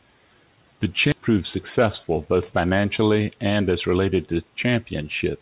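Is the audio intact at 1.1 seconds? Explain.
No. A skip ahead occurs at 1.12 to 1.14 s. Roughly 400 ms of speech was discarded, either lost in transit or thrown out by the jitter buffer when it overflowed, while later audio was already waiting. Playback does not pause or fill the hole. It jumps straight to the later audio. The two sides of the cut butt together almost seamlessly, so the sound lurches forward abruptly, with a chunk simply missing.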